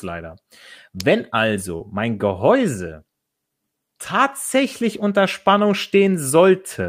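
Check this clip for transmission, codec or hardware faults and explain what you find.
Two faults occur in this speech clip: a short electrical click early on and a brief concealed dropout shortly after it.

At 1.00 s there is an electrical switching spike, a sharp snap lasting about 2 ms and laid on top of the speech. It is most likely a nearby switch, motor or static discharge arcing briefly, with the audio line picking up that burst of interference.

From 1.77 to 1.82 s there is short concealed packet loss. About 20 ms of the transmitted audio never reached the decoder in time. The receiver covered the gap for about 25 ms by extending the preceding sound, carrying its pitch forward if voiced or substituting shaped noise if not, and then crossfaded back into the real signal. The result is a brief smear or wobble in the speech at that point.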